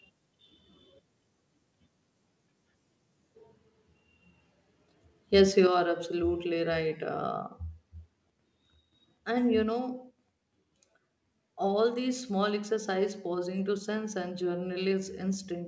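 At 5.67 s, right before "are absolutely right", the speech and the room behind it both drop by about 5 dB in one step. That's a microphone volume stepped down, most likely the call software cutting the input gain because it judged the mic too hot, heard over a call path that has nothing above 8 kHz.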